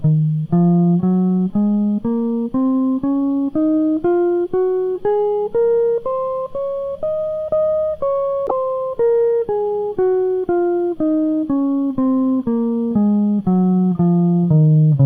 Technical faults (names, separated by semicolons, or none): damaged data in a compressed stream